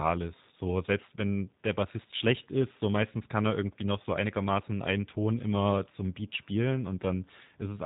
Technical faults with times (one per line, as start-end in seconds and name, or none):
0.00-7.86 G.729 codec